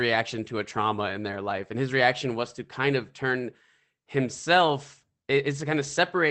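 Nothing goes wrong anywhere in this speech clip, which just comes through a normal call connection with its top end topping out around 8 kHz as that path tends to leave it.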